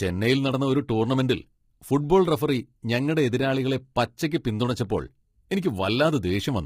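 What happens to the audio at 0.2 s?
The speech at 0.2 s, as throughout the clip, was likely squeezed through low-delay AAC compression of the AAC-ELD kind, where roughly 10 ms frames resolve pitch harmonics poorly; the heavy damage fits about 24 kbps, leaving the voice rough and grainy, noise filling between harmonics, and a dulled, synthetic-sounding top band.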